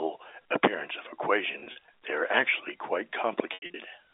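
Brief buzzy, held stutters break the sound from 1.52 to 1.88 s, after "appearance of the", then a longer held tone fading toward silence at 3.54 to 3.74 s, after "they are actually quite". This is packet loss with pitch repetition: the receiver replayed the last pitch period to cover gaps of up to 40 ms and then 80 ms, about 140 ms lost in each stretch. Throughout, the G.711 telephone coding holds the audio to a 300 Hz to 3.6 kHz line band.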